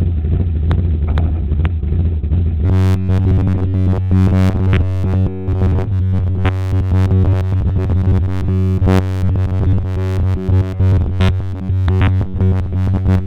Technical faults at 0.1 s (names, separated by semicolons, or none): none